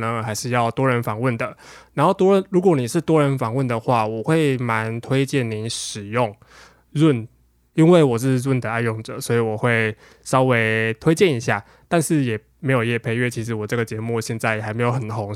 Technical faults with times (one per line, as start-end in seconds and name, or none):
none